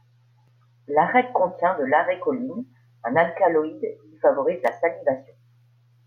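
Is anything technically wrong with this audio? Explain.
No, there's nothing technically wrong here that I can pick out; it's a speech recording that simply comes through without any trouble.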